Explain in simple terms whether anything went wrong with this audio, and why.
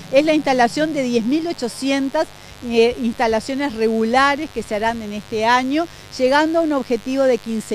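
A steady, raspy buzz sits under the sound from start to finish. This is mains buzz: electrical spikes from the 50 Hz power supply leaking into the recording.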